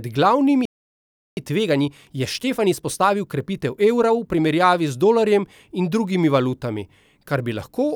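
At 0.65 s the speech cuts out mid-flow and the output stays silent until 1.37 s, a gap of about 0.72 s. This playback stall likely comes from the player running dry of buffered data or its output thread being held up, so nothing reached the output. On a waveform it shows as an abrupt flat line with no fade, and on a spectrogram as a clean vertical band of empty energy across all frequencies.

From 1.37 s to 4.37 s the speech runs hurried, at 1.15 times normal speed, while its pitch stays unchanged. This is time-compressed catch-up: the player makes up the backlog left by the stall by dropping short slices and cross-fading across the joins. On a spectrogram, harmonics keep their spacing but syllables are squeezed closer together, with small smears where the splices fall.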